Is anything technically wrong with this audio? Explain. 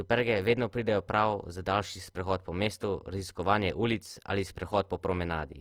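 Yes. Throughout the speech there is a plainly rough, grainy, noisy texture, yet the top end stays open up to about 20.2 kHz with few swirling holes. That likely points to Opus compression in its music mode, with a bitrate around 24 kbps: band energies survive, but starved bands are refilled with folded or noise content.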